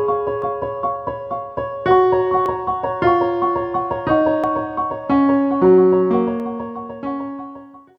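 Small skips land at 0.42–0.46 s, 2.46–2.49 s, 4.44 s and 6.40–6.44 s, about every 2 s. That's overlap between stream segments: overlapping timestamps make the player trim 12–42 ms of real sound.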